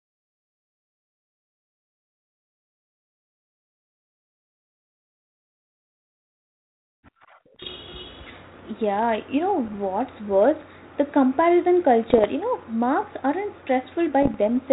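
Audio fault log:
7.56–7.70 s, 9.65–9.77 s (just after "you know"), 12.10–12.25 s, 14.22–14.36 s: bit errors on an ADPCM link. Flipped bits upset the decoder's step size and predictor, so each error produces a pop and a rough burst with brief level swings that ring on, rather than the clean gap of a lost packet.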